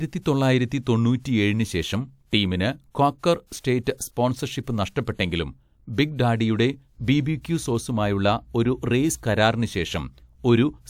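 At 3.60 to 3.64 s, just after "ശേഷം ടീമിന് ക്വാക്കർ", a 40 ms pre-echo puts a brief hiss ahead of a sharp attack, whose onset sounds smeared. Coding noise spread across the transform block leaks before the transient. Unlike reverberation, it comes before the sound, not after.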